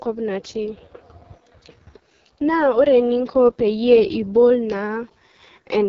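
From start to finish, the speech carries heavy AMR wideband (HD Voice) codec damage: a rough, raspy buzz from the pulse-driven vocal tract model, which fits the lowest 6.6 kbit/s mode. Nothing sounds above 7.3 kHz, which is wider than narrowband telephone audio.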